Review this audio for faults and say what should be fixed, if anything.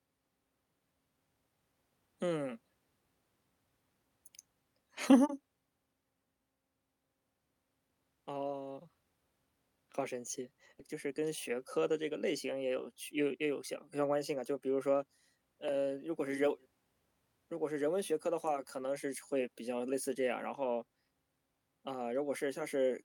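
At 10.79 to 10.81 s the audio does a skip ahead. Roughly a second of speech is dropped and the two sides are spliced with no fill, so playback jumps straight forward. Sizing the jitter buffer to absorb late bursts would prevent this discard.

Jitter buffer speed-up follows at 10.93 to 12.01 s at 105% and at 12.53 to 13.54 s at 106%. Each pass trims about 70 ms of short pitch-period pieces, so the speech sounds hurried at unchanged pitch. Smoother network delivery would avoid the backlog that triggers it.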